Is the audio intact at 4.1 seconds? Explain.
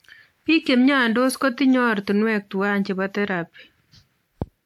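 No. At 4.1 seconds, as throughout the speech, there is generation loss: swirly, hollow, smeared sound with blurred attacks, likely from around seven lossy re-encodes, which fits a 128 kbit/s WMA chain. A spectrogram shows nothing above 19.7 kHz.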